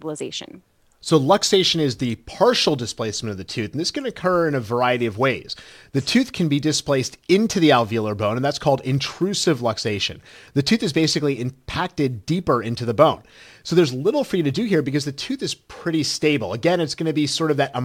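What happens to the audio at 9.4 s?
Nothing goes wrong at 9.4 s; the speech carries on intact through that moment.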